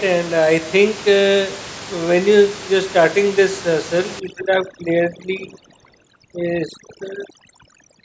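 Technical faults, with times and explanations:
4.2–8.0 s, overdone noise removal: from here to the end the noise reduction clamps down far too hard. The room noise, sitting about 13 dB under the speech, drops away and breaks up into twinkling specks, and quieter parts of the voice vanish too.
4.33–4.47 s, echo leak: a brief, faint scrap of the voice comes back 392 ms late, around 15 dB below the speech. It's likely from a loudspeaker on one end whose echo canceller didn't fully cancel what its microphone picked up.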